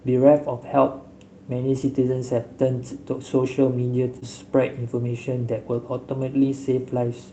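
At 1.81 to 1.87 s, 4.07 to 4.17 s and 5.74 s, packets were lost and rebuilt from error correction: the decoder played the low-bitrate copies carried in the following packets, so nothing drops out, but those 40, 60 and 20 ms stretches of speech turn rougher and noisier. This is consistent with two, three and one 20 ms packets lost.

Right after, from 4.19 to 4.23 s, a short concealed packet loss leaves about 20 ms of audio missing. The receiver stretches the preceding sound across the hole and blends back, heard as a brief smear or wobble through the 8 kHz-wide Opus call path.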